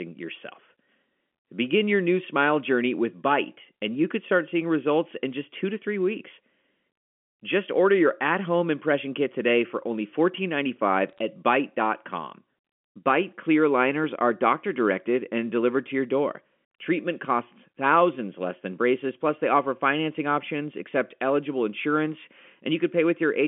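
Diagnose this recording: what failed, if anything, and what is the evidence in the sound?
Bit errors on a digital phone line, at the transmission stage, produce a brief burst of sharp ticks over the speech from 11.09 to 11.19 s. A small fraction of flipped bits, around a fifth of a percent, corrupts single G.711 samples. On the waveform these appear as isolated one-sample spikes. On the spectrogram they show as thin vertical lines across the 200 to 3400 Hz telephone band.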